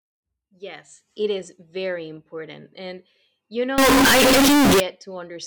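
Speech, with a float read as integer fault from 3.78 to 4.80 s. Here the audio turns very loud and harsh, nearly square at an almost fixed, high level. Background noise rises as loud as the speech. Pitch can still be followed. The likely cause is 32-bit float samples read as 32-bit integers.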